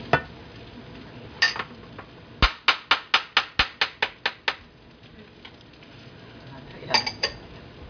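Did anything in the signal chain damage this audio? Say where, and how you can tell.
No, nothing along the chain seems to have harmed this audio, and I can't hear anything that points to a problem at any stage.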